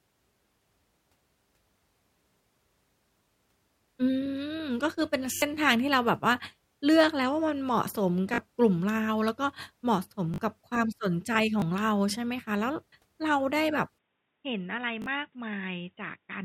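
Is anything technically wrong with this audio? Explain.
Yes, two kinds of fault are present.

Repeated buffer occurs six times: 3.24–3.26 s, 5.34–5.42 s, 8.34–8.38 s, 10.34–10.38 s, 11.6–11.62 s and 15.02–15.06 s. Each time, fresh audio failed to reach the output in time, so the device replayed the previous block. The repeated slice is about 20 ms long, which fits a 20 ms buffer, and each repeat joins hard. The result is a brief stutter or buzzy click. The 5.34 s event is the longest, and the replays there cover roughly 70 ms of missing audio.

An input switched to a poorer device is heard from 13.98 s to the end, with no gap at the change. The sound abruptly turns dull and boxy, with nothing above 3.8 kHz. The level drops by about 5 dB, and a new noise floor appears about 55 dB under the signal. That combination of narrower band, new tone and different noise likely comes from the system switching to another microphone or a headset's call profile partway through.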